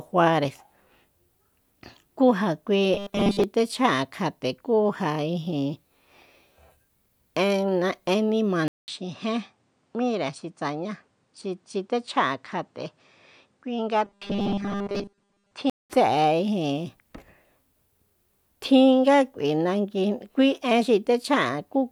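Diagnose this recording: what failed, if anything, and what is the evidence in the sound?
At the driver or buffer stage, there's a robotic, metallic buzz from 2.94 to 3.44 s and again from 14.05 to 15.52 s, pitched at 200 Hz. That points to short buffers being repeated while most of the real audio is skipped, likely a 5 ms block looping when data arrives late.

At the input stage, the sound goes dull from 8.68 to 15.90 s, with a narrower band. There's a 200 ms gap at the switch, the level drops by about 5 dB, and a new faint noise floor appears. That's likely the input switched to a poorer device.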